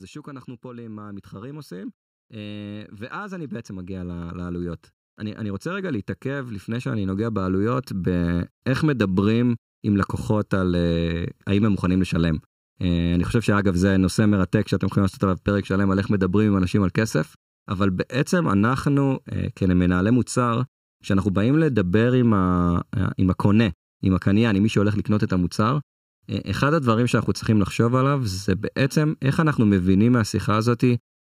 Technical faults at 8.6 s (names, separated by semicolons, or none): channel delay (comb filtering); automatic gain rising